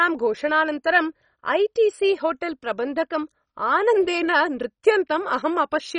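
A speech clip, dull and gurgling throughout, with granular smearing that points to heavy MP2 compression, likely at a low rate around 32 kbps. A spectrogram shows nothing above 10.3 kHz and upper bands flickering on and off. From 0.95 to 4.76 s, channel delay (comb filtering) adds extra dullness: one channel lags the other by roughly a single sample, so summing them places the first notch near 20 kHz. That shows on a spectrogram as a gentle darkening of the highest remaining frequencies.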